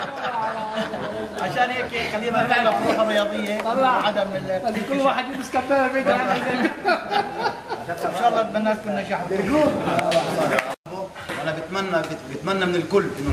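No technical faults can be heard anywhere in the clip. Nothing breaks into the sound at any point, and it runs without interruption to its end.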